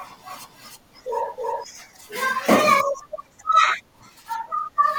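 From the very start until about 1.64 s, there's a doubled audio track: a second full-band copy of the speech trails roughly a third of a second behind at about the same level, with no decay, then drops out abruptly. It's likely a slower capture path.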